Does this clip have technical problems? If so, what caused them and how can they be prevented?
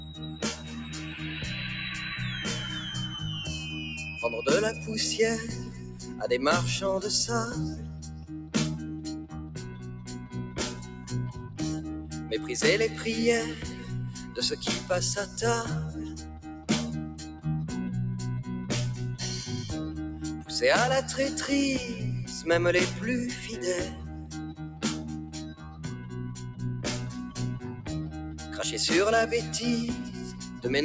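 Yes. Throughout the clip the level pumps and flutters: sudden onsets come through, but sustained parts and decaying tails sink, with the loss swinging by about 10 dB. This is a noise suppressor applied to music or sounds. A suppressor built for speech, running in the call's microphone path, treats steady tones, ambience and reverb as noise and turns them down. The same path also cuts everything above 8 kHz, which is expected of call processing. To prevent this, switch off noise suppression, or use a music mode, before sending anything other than speech.

There are also eight spots where the sound cut by the noise suppressor drops below its surroundings, by about 5 to 7 dB at the deepest. They fall at 0.0 to 0.71 s, 5.69 to 6.09 s, 7.81 to 8.54 s, 9.24 to 11.59 s, 13.76 to 14.36 s, 24.01 to 26.61 s, 27.73 to 28.41 s and 30.31 to 30.6 s. In the two longest stretches, around 9 to 12 s and 24 to 27 s, the dip adds up to well over a second. 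In each spot the suppressor judged the held or fading material to be noise and pulled it down, so those passages thin out or cut short. Disabling the suppressor for non-speech audio prevents these dips as well.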